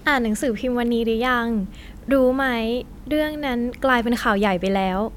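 No technical faults are audible.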